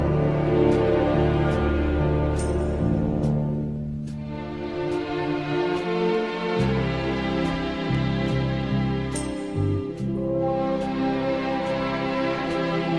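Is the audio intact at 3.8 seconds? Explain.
Yes, at 3.8 seconds the audio runs on cleanly, with no dropout, click, distortion or other technical fault to be heard.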